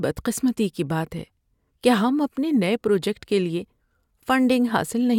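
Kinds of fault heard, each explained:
No technical faults detected anywhere in the speech recording.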